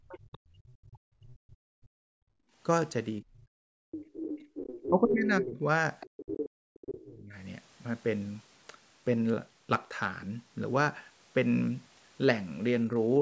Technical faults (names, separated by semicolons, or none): speech suppressed in double talk; background gated by the echo canceller; other side's voice leaking through